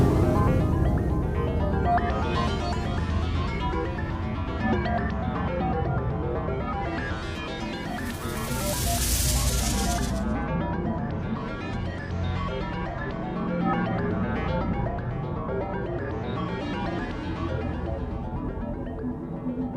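Nothing stood out as a technical problem on listening.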